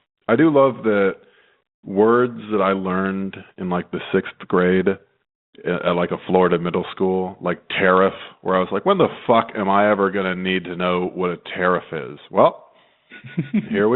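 Nothing goes wrong here: the speech comes over a G.726 ADPCM link at 32 kbit/s, held to the telephone band of about 150 Hz to 3.7 kHz with only the light coding grain that rate leaves behind, and no faults turn up along the way.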